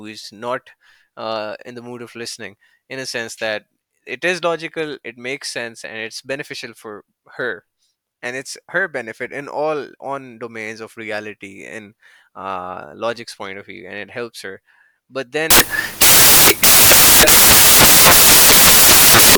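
Right at 15.50 s the speech gives way to loud, harsh broadband noise that runs to the end at 19.37 s. That's samples built from the wrong bytes: the reader is assembling each sample out of mismatched bytes, whether shifted by one, swapped in order or aligned differently, so the jittery low bits end up as the big part of every value.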